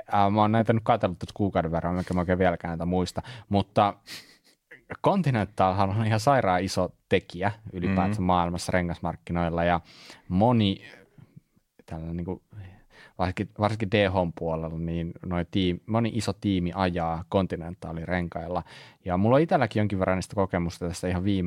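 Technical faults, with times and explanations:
The speech signal shows no technical faults at any point.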